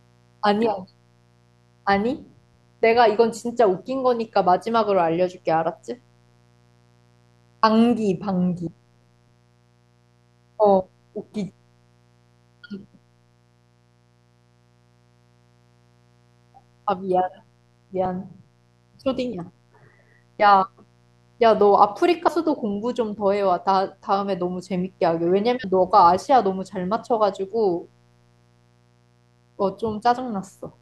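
Mains buzz runs throughout: switching spikes locked to 60 Hz mains put a raspy harmonic buzz about 40 dB below the speech. Compressed frames skipped at 8.67, 18.05, 19.32, 22.27 and 25.63 s: missing or rejected frames, consistent with 24 ms frames, make the speech jump ahead by roughly 20 to 100 ms.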